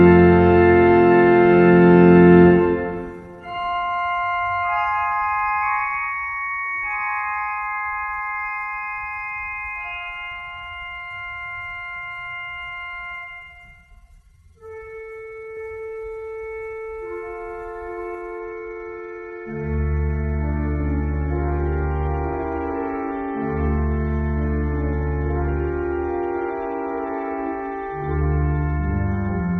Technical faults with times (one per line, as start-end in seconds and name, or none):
15.57-18.15 doubled audio track
18.38-29.60 adaptive stream at a lower bitrate